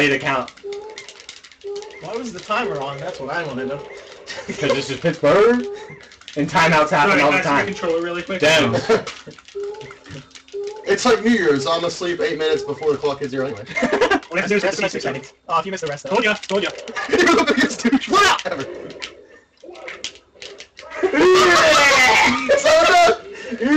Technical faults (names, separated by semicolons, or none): time-stretched section